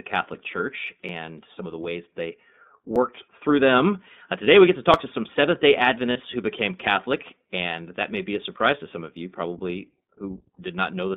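Speech coded with the iLBC codec, which leaves it plainly rough and synthetic and confined to a band of roughly 200 Hz to 3.6 kHz. That fits the 15.2 kbps, 20 ms-frame mode, in which each frame's excitation is coded independently. A spectrogram would show nothing above 3.6 kHz and a grainy texture in the harmonics. At 1.09 s, just before "some of the ways", at 2.96 s, between "of the ways they" and "through them", and at 4.94 s there are jumps where the sound skips ahead without any silence, losing a few milliseconds at the first and around 10 ms at the others. This is likely a dropped buffer (overrun), with samples overwritten before being read and the two sides spliced. A waveform would show a discontinuity and the spectrogram a thin vertical broadband line. From 6.11 to 6.17 s, just before "who became", lost iLBC frames leave 40 ms, consistent with two frames, filled by a held, slightly buzzy vowel. 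The decoder repeated the last pitch cycle mixed with noise, which on a spectrogram appears as flat, smeared harmonics before normal speech resumes almost immediately.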